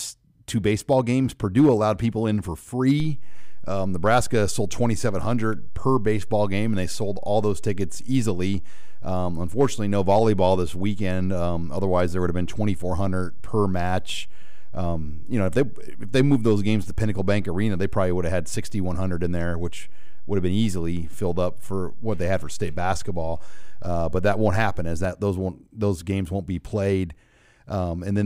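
At 3.0 s a DC step shifts the zero line of the speech waveform by about -23 dBFS, giving a low thump; the offset holds until 25.05 s. Between them the speech continues unchanged, riding on the offset.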